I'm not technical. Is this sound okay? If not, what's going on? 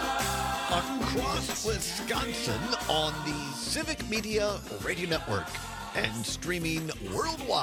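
No. At about 3.34 s the radio loses its digital signal and cross-fades, over a little under half a second, to the FM analogue broadcast of the same station. This is digital radio blending to analogue. From there until about 7.24 s a faint background hiss sits under the sound. The loudness stays the same through the switch.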